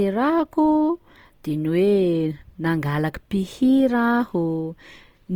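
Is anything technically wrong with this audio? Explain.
Yes. Throughout the speech there is plainly audible Opus compression damage, likely from its CELT music mode at a low rate; the graininess fits something around 24 kbps. The encoder keeps each band's energy but, short of bits, fills bands by folding lower content or injecting noise, so the sound turns rough and grainy. That separates it from MP3: there are few spectral holes and little swirling, and the band stays full, reaching about 20.2 kHz rather than sounding muffled.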